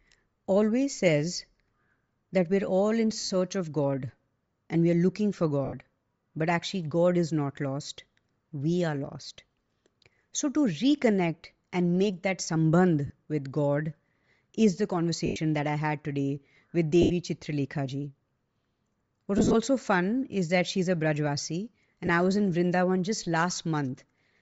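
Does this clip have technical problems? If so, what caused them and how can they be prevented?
Yes. The speech was likely sent through Bluetooth LC3 compression at a low bitrate. The coder discards much of the upper spectrum and fills it back in with noise, which gives the voice a plainly audible breathy, grainy edge throughout. The amount of grain fits a rate near 32 kbps. Sending at a higher LC3 bitrate would prevent it.

Lost LE Audio frames occur at 3.20, 5.65, 9.56, 13.07, 15.26, 17.02, 19.38 and 22.07 s. The decoder filled each gap by repeating the last spectrum with random signs, so the voice briefly smears into noise for 20 to 100 ms. At 3.20, 9.56 and 19.38 s the losses are scattered in short runs over 0.1 to 0.16 s. A stronger, less congested radio link would prevent them.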